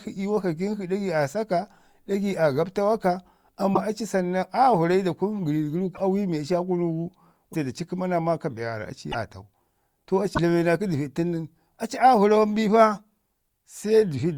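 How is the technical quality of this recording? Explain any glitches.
The speech has five brief glitches where it skips ahead with a chirp or noise burst, at 3.73–3.77, 5.94–6.01, 7.53–7.55, 9.11–9.15 and 10.33–10.38 s. The likely cause is a broken MP3 bit reservoir: frames fitting 24 ms were lost, so following frames decoded from wrong borrowed data.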